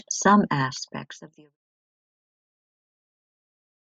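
No technical faults are audible.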